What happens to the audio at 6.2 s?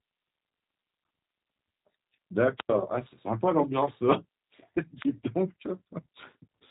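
At 6.2 s the speech carries the G.729 codec damage present across the whole clip: a low-rate coder, consistent with about 8 kbit/s, rebuilding each 10 ms frame from a vocal tract model, a pitch predictor and a few pulses. It sounds plainly rough and synthetic. On a spectrogram the energy stops at a flat ceiling near 3.8 kHz with nothing above, and the harmonics look smeared rather than crisp.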